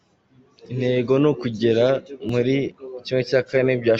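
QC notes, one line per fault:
2.29 s, overlap between stream segments: just after "ni ukugera", about 15 ms of speech is missing where two stream segments, which appear to be 2-second chunks, carried overlapping time stamps and the player trimmed the overlap from audio that was never actually duplicated. The waveform jumps abruptly with no crossfade, so a barely perceptible skip is heard. On a spectrogram this shows as a thin vertical broadband stripe, and the waveform shows a sudden step discontinuity.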